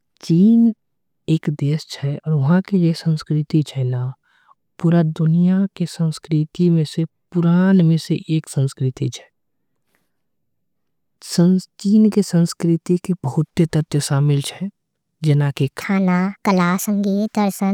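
Speech. From 15.81 s to the end, a section at the wrong speed runs 1.45 times fast and about seven semitones higher, likely from a clock mismatch. On a spectrogram, the harmonics there jump upward and spread apart.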